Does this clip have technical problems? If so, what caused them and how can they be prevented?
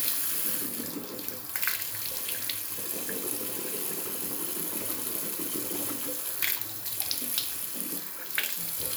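No, nothing stood out as a technical problem on listening to this sound, so there is nothing here that needs preventing.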